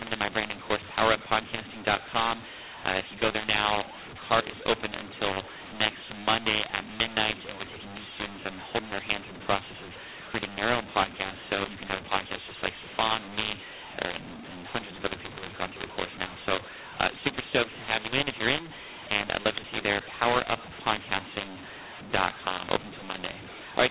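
From start to finish the speech sounds harsh and distorted, levels lurch unevenly, and pauses fill with noise. This is a mu-law and A-law mix-up: the 4 kHz-limited telephone audio was coded as A-law but decoded as mu-law, mis-scaling every sample and lifting the quietest ones.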